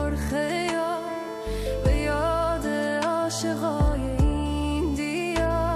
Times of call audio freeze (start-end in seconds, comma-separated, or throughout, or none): none